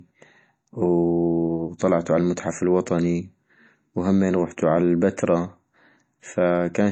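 From start to finish, the speech stops dead at about 8.3 kHz, with nothing above it, and carries the smeary, slightly watery texture of heavy MP3 coding. Together that points to low-bitrate audio saved at a high bitrate, likely a file first squeezed to something around 32 kbit/s and later re-encoded near 192 kbit/s. The second pass can't bring back what the first threw away, so the dull top end and swirly artefacts stay put.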